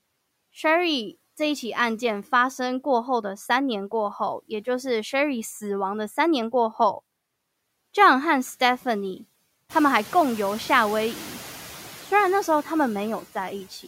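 Noise suppressor artifacts run through the whole speech clip. The suppressor lowers the bands it judges to be steady noise, frame by frame, by about 16 dB. So the background drops away in pauses and comes back under each phrase. This pumping grows clearer once the room noise rises by about 16 dB, around nine and a half seconds.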